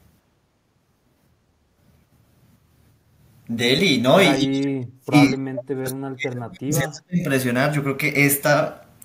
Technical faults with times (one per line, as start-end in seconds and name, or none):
4.37-7.21 speech suppressed in double talk